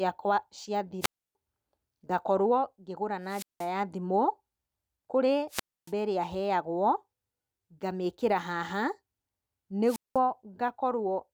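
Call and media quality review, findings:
Wireless microphone squelch dropout, 1.00–1.35 s, 3.26–3.71 s, 5.49–5.92 s, 9.85–10.19 s. Brief hiss rise, then near-silent holes of about 294, 180, 279 and 197 ms. Analogue FM mic RF fading below receiver squelch threshold; receiver mutes until carrier recovers.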